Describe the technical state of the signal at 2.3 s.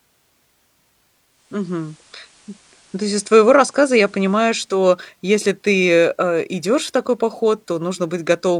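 At 2.3 s the speech is mid-way through a digital radio blending to analogue, running from 1.24 to 4.88 s. The receiver has cross-faded over 441 ms to the FM broadcast, adding faint hiss about 35 dB down. The waveform level is unchanged.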